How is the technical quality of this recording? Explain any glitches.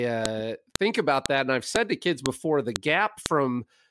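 The speech is marred by a repeating glitch: a file header played as audio. The stream was assembled from half-second WAV pieces whose headers were never stripped, so each piece begins with a few dozen bytes of header data that play as samples. This produces a sharp, loud click every 0.5 s, at 0.26, 0.76, 1.26 (between "think about" and "that and I've"), 1.76, 2.26 (just after "to kids"), 2.76 and 3.26 s, regardless of what the speech is doing.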